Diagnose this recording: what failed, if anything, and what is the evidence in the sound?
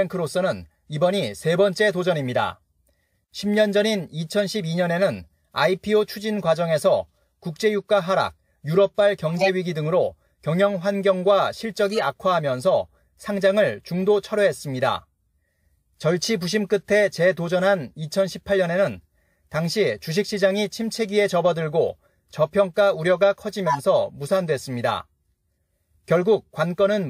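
Codec stage: corrupt frames decoded, giving chirp-like bursts at 9.28–9.48, 11.85–12.03 and 23.67–23.80 s. Damaged bits misplace energy in frequency, adding spurious sound instead of leaving the gap a dropout would.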